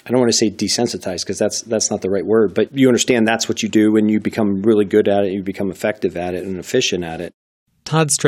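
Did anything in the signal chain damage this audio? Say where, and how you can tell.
No, nothing in the signal chain stood out as having damaged this speech recording on listening.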